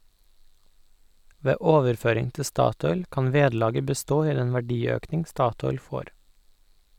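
Speech recording with no technical faults to report.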